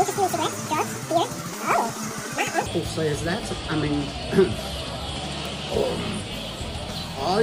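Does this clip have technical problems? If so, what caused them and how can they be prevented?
Yes. From 0 to 2.66 s, the audio was read two samples at a time (double speed): the reader treated sample pairs as single frames, playing twice as fast and an octave (12 semitones) high. Declare the channel count and sample width explicitly and verify them against the file header before decoding.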